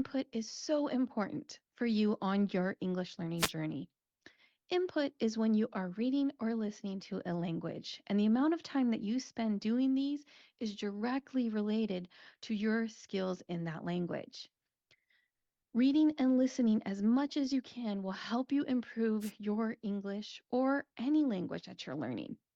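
A wireless microphone noise hit occurs at 3.38 to 3.51 s and again at 19.20 to 19.32 s, just after "can will help you". Each time, the FM radio link from the microphone fades briefly as reflected signal paths cancel at the receiver, so receiver noise surges up. Both events last only about 0.12 to 0.14 s and come across as a quick swish or burst of static.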